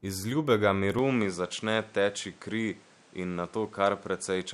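Speech recording where, from 0.99 s to the end, the input likely switched to a poorer device: the band stops near 10.5 kHz, and a new noise floor appears about 30 dB down, with no gap or level jump.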